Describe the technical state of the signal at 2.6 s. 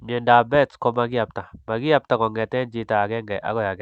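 At 2.6 s the speech comes through intact, with no dropout, glitch or distortion, only the ordinary coding character of the call path it passed through.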